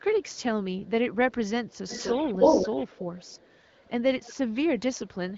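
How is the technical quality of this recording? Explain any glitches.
The recording suffers from echo leak, with the speech band ending near 7.5 kHz, as expected from an AMR wideband (HD Voice) codec at a rate that sounds like around 16 kbit/s. The likely cause is an echo canceller on a loudspeaker end failing to remove what its microphone caught, sending back a copy delayed 252 ms. It is faint at 0 to 0.42 s, 0.8 to 0.9 s and 4.79 to 5.37 s, stronger at 4.21 to 4.55 s, and as loud as the speech itself from 1.66 to 3.9 s.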